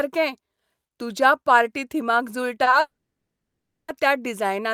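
At 2.63 s and again at 2.70 s the speech briefly hangs: a sound is held a little too long, about 30 ms the first time and 20 ms the second, with a faint buzzy smear. These are short stalls from a late packet. A packet missed its playout time, the jitter buffer emptied, and the receiver stretched the last sound until the packet turned up. Playback then resumed exactly where it left off, so nothing is lost, but everything after is pushed back.

From 2.80 s to 3.91 s comes a longer call audio freeze. The last sound trails off as a fading buzz and then drops to near silence for roughly a second (about 980 ms) before the speech picks up again mid-flow. This is likely a run of packets delayed in transit, draining the buffer while the receiver bridged the wait. About 1.08 s was inserted this way, with no speech skipped, so the rest of the clip runs that much later.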